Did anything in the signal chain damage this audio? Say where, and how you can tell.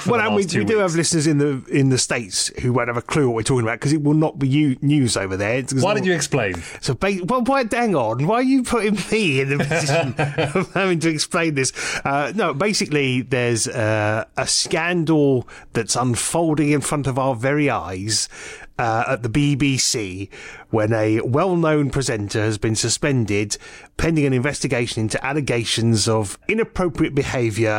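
Yes. There is a loud pop, actually two in quick succession, between 6.55 and 6.77 s, peaking roughly 10 dB above the surrounding sound, which carries on uninterrupted underneath. The stage is likely the analogue wiring, from a plug, switch contact or static discharge. A sudden voltage step is added to the signal, and the circuits downstream shape it into a short thump. This is why it sits on top of the sound rather than replacing it.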